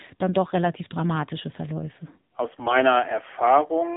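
Throughout, the speech carries the AMR narrowband mobile codec: nothing above 4 kHz, and a plainly buzzy, synthetic texture that fits a low rate around 7.4 kbps. From 2.58 to 2.77 s, AMR bit errors leave pitch and level intact but make the voice hoarse and gargly. Flipped bits, around 3 percent, misplace the excitation pulses, which suggests about nine damaged frames.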